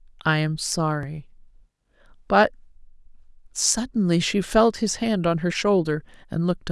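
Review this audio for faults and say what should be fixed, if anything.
A repeated buffer occurs at 1.03 s in this speech. Fresh audio failed to reach the output in time, so the device replayed the block it had just played. The repeated piece is only about 2.7 ms long, which fits a 64-sample buffer, and it sounds once more before normal playback resumes. The two hard joins squeezed into that tiny span come across as a single click rather than a stutter, with essentially no audio lost. To prevent it, give the audio thread more headroom, either with a larger buffer or higher scheduling priority, so each block is delivered before the device needs it.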